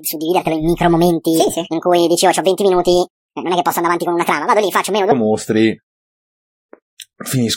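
From the start until 5.12 s the speech sounds hurried and chipmunk-high, lifted by about ten semitones. This is a section at the wrong speed, running 1.63 times too fast, likely because that stretch was played back against the wrong clock.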